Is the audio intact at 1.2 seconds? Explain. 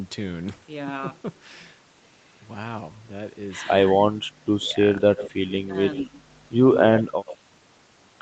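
Yes, the speech at 1.2 seconds is intact, with no dropout, click or other fault at that moment.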